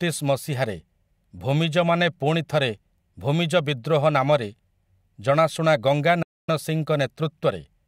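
Bluetooth dropout from 6.22 to 6.49 s, right after "ଜଣାଶୁଣା ଗଙ୍ଗା": the speech cuts to silence for 255 ms, likely from late wireless packets, then resumes further along.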